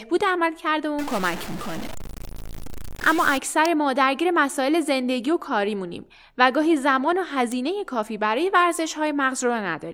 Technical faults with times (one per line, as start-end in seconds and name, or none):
0.99-3.38 stuck bit
3.65 electrical switching spike
7.52 electrical switching spike